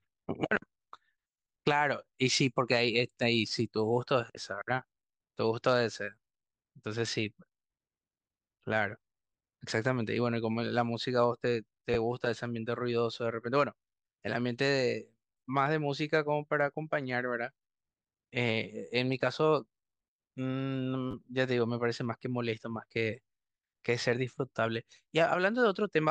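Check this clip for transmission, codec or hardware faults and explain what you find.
Two brief playback faults show up in this speech clip, both of the same kind. In the repeated buffer faults at 11.94 s and 21.11 s, fresh audio reached the output too late, so a 10 ms buffer replayed two and then three extra times. Each is heard as a tiny stutter, closer to a click or short buzz.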